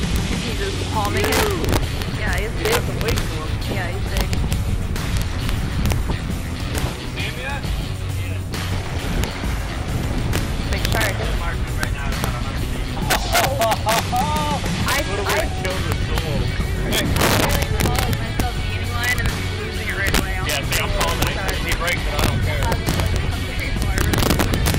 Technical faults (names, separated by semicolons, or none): integer overflow